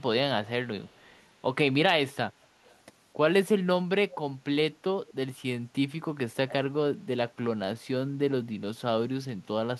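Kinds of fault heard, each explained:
Echo leak: brief, faint copies of the speech return 248 ms late at 0.85–1.22, 2.64–2.76, 5.07–5.14 and 6.48–6.53 s, barely audible at first and noticeably louder by the last two, likely from a far-end loudspeaker whose echo canceller let some through.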